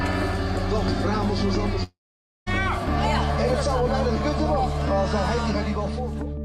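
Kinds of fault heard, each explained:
Long network dropout: from 1.83 s to 2.48 s the sound becomes a fading buzz, then 500 ms of near silence, and it resumes with 640 ms skipped, likely an interrupted stream. Spectrogram shows smeared decaying bands, then blankness; the waveform tapers to flat.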